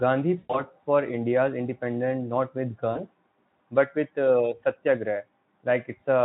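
From 0.37 to 0.61 s, and again from 2.92 to 3.04 s, VoIP packet loss concealed by the speech codec stretches the sound into a fading buzz, about 120 ms at its longest, then about 40 ms. Unlike a dropout to silence, the decoder fills each gap from the last pitch over Speex audio that shows little codec damage.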